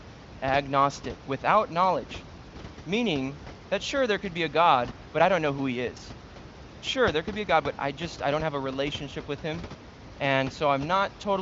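No faults: the speech sits about 16 dB above room noise, and the band tops out near 7.6 kHz with at most faint coding damage, consistent with AMR wideband (HD Voice) at a high rate such as 23.05 kbit/s.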